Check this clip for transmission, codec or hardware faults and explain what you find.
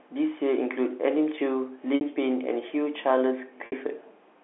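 Two brief transmission dropouts occur in this telephone-band speech, with the G.711 telephone coding itself audible only as the usual 300 to 3400 Hz line band.

Packet loss with pitch repetition, at 1.95 to 2.01 s and again at 3.66 to 3.72 s: about 60 ms of audio never arrived each time, a gap that fits two lost packets. The receiver concealed each hole by repeating the last pitch period and fading it down, so the speech briefly freezes into a held, slightly buzzy tone before it resumes.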